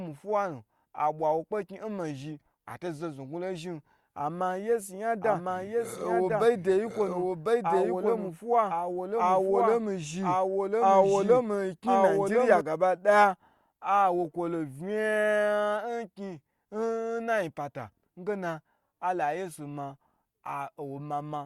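From 5.21 s to 12.61 s the speech picks up a doubled audio track: a second, full-band copy trailing about a second behind, around 5 dB quieter, with no room tail. It cuts in and out abruptly, likely from a slow second capture path.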